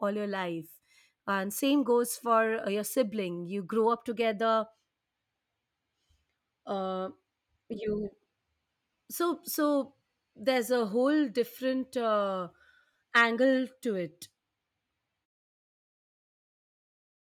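Nothing in this speech is amiss, and the level just eases gently down toward the end, starting around 15 s and reaching silence by 15.27 s.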